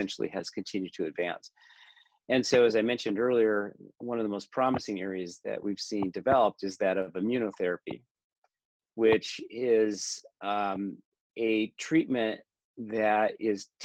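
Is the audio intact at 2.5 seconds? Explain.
No. At 2.5 seconds, as throughout the clip, a faint hiss and roughness rides on the sound, strongest where it is loud and bright. This is sample clock jitter: a converter clock wandering by around a microsecond mistimes samples, leaving error roughly 45 dB below the signal.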